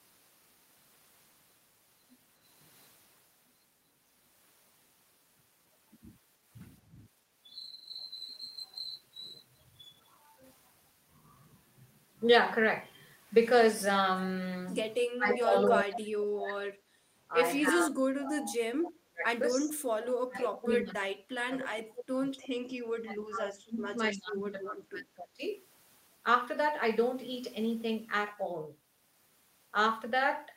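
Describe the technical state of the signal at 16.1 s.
Speech suppressed in double talk runs from 15.06 to 16.72 s, covering 16.1 s. The speech drops by up to about 35 dB and is suppressed for roughly a second and a half, likely because an echo canceller could not separate the local talker from the loudspeaker echo during simultaneous far-end playback and attenuated everything.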